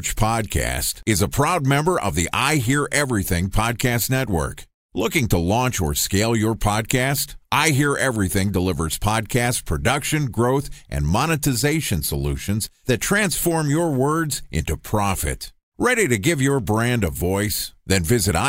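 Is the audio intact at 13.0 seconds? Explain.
Yes, at 13.0 seconds the speech plays through intact, with no dropout, click, distortion or other fault to be heard.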